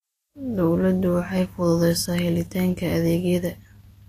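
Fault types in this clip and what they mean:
Vorbis compression: The speech carries a hissy, grainy treble that sounds like noise standing in for fine detail, with roughened tones and softened consonant attacks, and nothing is heard above about 14.2 kHz. This is likely lossy Vorbis coding, and the clearly audible damage fits a low bitrate near 34 kbps. A plain low-pass filter would only remove the top without adding grain, and MP3 damage tends toward watery, swirling artefacts rather than this noise-like hiss.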